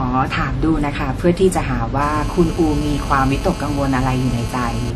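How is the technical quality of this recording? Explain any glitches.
The technical quality is compromised by two faults: a dulled, smeared coding character through the whole recording and a raspy buzz over its second half.

Throughout the speech there is a hard ceiling at 12.4 kHz, with artefacts from more than one codec heard together that don't belong to any single codec. This is likely transcoding between lossy codecs: a WMA-style encode at a moderate rate followed by AAC-LC at a lower one, each stage wasting bits re-coding the earlier damage and adding its own. On a spectrogram the energy stops at a flat shelf near 12.4 kHz, with patchy holes and blurred transients below it.

From 2.01 s to 4.91 s a GSM phone buzz sits under the speech, about 16 dB below it. A 2G handset on a call nearby was transmitting in bursts at 216.7 Hz, and the audio circuitry rectified those radio pulses into sound. 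Because it was a call, the buzz holds steady, a harsh, rasping tone unrelated to the speech. A spectrogram shows a comb of evenly spaced lines at 217 Hz and its many harmonics, and the waveform shows a repeating pulse train riding on the signal.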